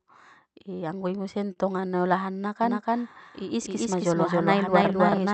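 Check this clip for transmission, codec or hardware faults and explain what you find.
Two faults are audible in this speech clip: a burst of stuttering early on, and a doubled audio track that runs from the middle to the end.

Repeated stalls (stutter), 0.99 to 2.00 s: packets arrived late, so the jitter buffer kept running dry and the receiver stretched the last sound to bridge each wait. About a dozen brief holds, none longer than 28 ms, make the speech drag and judder, though nothing is lost.

Doubled audio track, 2.63 s to the end: likely a second capture path or a misaligned edit is mixing in a copy of the same audio. It trails by roughly a third of a second at about equal level, heard as a clean, uncoloured repeat with an abrupt onset.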